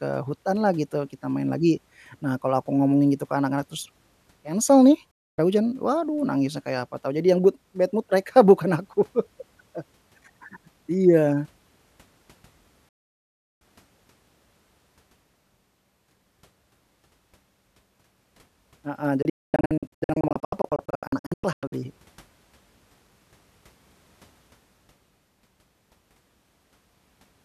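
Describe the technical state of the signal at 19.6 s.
At 19.6 s the speech is inside a digital broadcast dropout, 19.22 to 21.73 s. The receiver mutes on failed frames, punching short holes totalling about 1.3 s, the longest 240 ms, with 3 ms fades. Unlike analogue fading, the gaps are clean silence, not hiss.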